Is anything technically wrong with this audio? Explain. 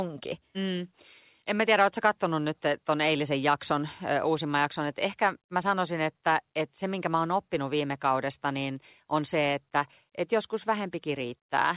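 No, nothing in this speech recording is technically wrong.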